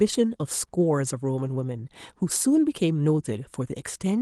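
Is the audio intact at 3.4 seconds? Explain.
Yes, the audio is intact at 3.4 seconds, with no fault at that moment.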